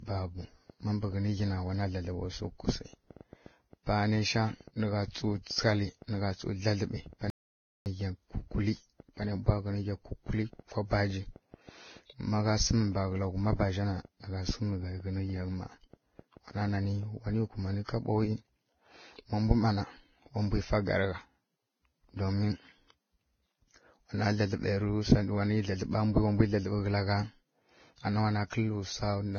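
Transcoding between lossy codecs runs through the whole clip. The speech has nothing above 6.6 kHz, and layered artefacts suggest it likely went through several lossy codecs in turn, plausibly a low-bitrate Vorbis encode followed by WMA and HE-AAC. Each pass re-encodes the earlier damage and adds its own, so the result sounds dull, with the different artefacts heard together.

A train of clicks runs from 0.09 to 17.75 s: about seventy similar pulses, roughly four per second at an uneven pace, each about as loud as the speech. It is likely interference or a struggling interface, and it ticks over both the speech and the pauses.

An audio dropout to silence lasts from 7.30 to 7.86 s, about 0.56 s, when the input was likely lost and the recording went on writing silence. The speech cuts off mid-flow into silence with no room tone, and that stretch of speech is gone.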